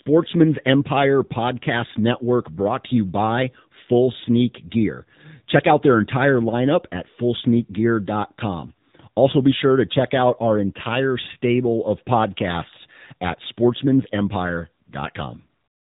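From start to finish the speech has passed through the AMR narrowband mobile codec (AMR-NB), which rebuilds the voice from a coarse vocal-tract model at a low bitrate that fits its 7.4 kbps mode. Nothing survives above 3.8 kHz, and the voice comes across as muffled, buzzy and plainly synthetic.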